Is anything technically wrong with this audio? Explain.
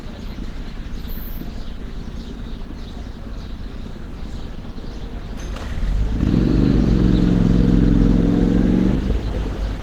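Yes. Throughout, the sound is grainy and hoarse, with plainly audible codec damage. This is likely Opus compression in its hybrid mode, at a bitrate that fits roughly 16 kbps.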